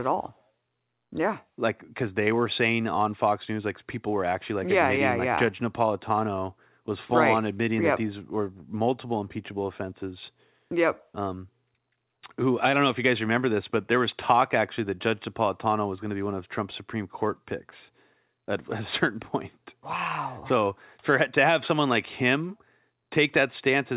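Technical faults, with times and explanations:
No technical faults can be heard in this speech.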